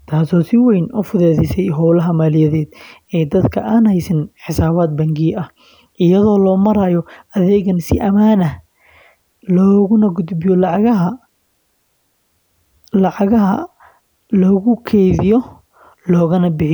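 No technical faults can be heard anywhere in this speech recording: the signal stays continuous and intact, with nothing breaking, distorting or shifting along the way.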